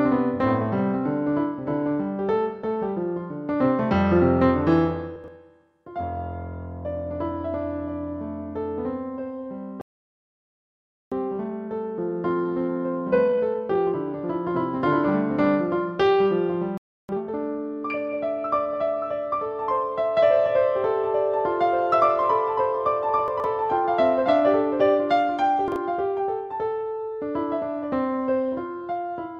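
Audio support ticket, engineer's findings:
Chunks out of order at 5.16–5.28 s, 23.28–23.44 s and 25.68–25.76 s: jumbled moments where a 40 ms chunk plays 2, 3 and 1 chunks late, leaving three hard joins each.

Playback stall at 9.81–11.12 s (1.3 s) and 16.78–17.09 s (0.31 s): output drops to silence mid-flow, likely buffer underrun or blocked player thread.

Time-compressed catch-up at 11.12–14.12 s (1.1x) and 17.09–17.39 s (2.0x): audio hurried at normal pitch after each stall; player cuts and cross-fades small pieces to drain its backlog.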